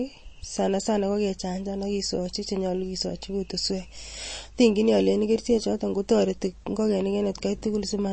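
The speech carries plainly audible MP3 compression from start to finish. Nothing sounds above about 8.3 kHz, so the top is cut off flat. Weak detail flickers and sounds watery. This likely comes from low-bitrate encoding, which fits roughly 32 kbps.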